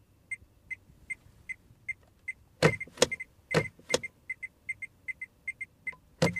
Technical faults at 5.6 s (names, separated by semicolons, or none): doubled audio track